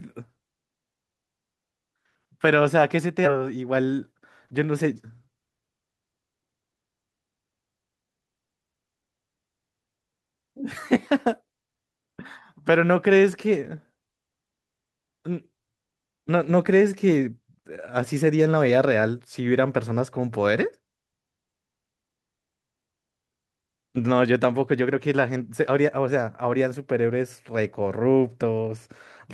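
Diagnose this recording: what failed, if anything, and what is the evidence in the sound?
Network and jitter buffer: a skip ahead at about 3.25 to 3.36 s drops nearly half a second of speech, and the two sides butt together with no gap.

Same jitter buffer, draining backlog: a jitter buffer speed-up from 3.86 to 4.55 s plays speech about 5% fast at unchanged pitch, trimming pitch periods, so it sounds briefly hurried.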